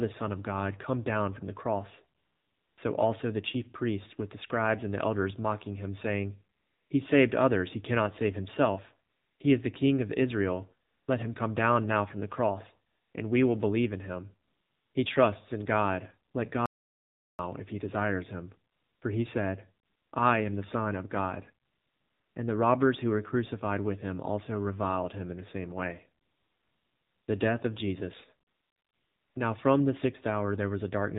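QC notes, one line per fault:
Throughout, AMR narrowband mobile codec: the speech has passed through AMR-NB at 7.4 kbps, and the damage is plainly audible. Everything above 4 kHz is gone, which leaves the voice boxed-in and dull with no crisp sibilants. At this low rate, each 20 ms frame is rebuilt from a vocal-tract model driven by only a few pulses per 5 ms subframe. That thin excitation gives the voice its buzzy, synthetic edge.
2.18 to 29.36 s, AMR comfort noise: twelve pauses in total, from a single 20 ms blip at 16.32 s up to about 1 s (26.24 to 27.28 s, right after "in the same way"). Another falls at 19.86 to 20.12 s, between "he said" and "I am the". In each one the sender judged the talker silent and stopped sending speech frames. The receiver then filled the gap with smooth synthetic noise built from a coarse level-and-spectrum description, so the real background switches out and a flat hiss switches in.
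16.66 to 17.39 s, audio dropout to silence: the sound cuts to silence for about 0.73 s and resumes just before "if he desires him". No room tone or comfort noise fills the gap, so the input signal itself was missing. The likely cause is a lost link or a briefly disconnected input while the recorder kept writing silence, and whatever was spoken in that stretch is unrecoverable.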